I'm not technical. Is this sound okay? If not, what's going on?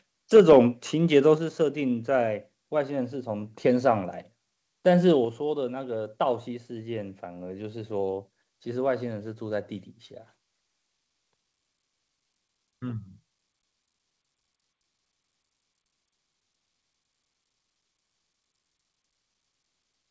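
No. At 1.38 and 5.25 seconds the speech suddenly gets quieter in a single step, most likely the call software turning the microphone volume down (microphone volume stepped down).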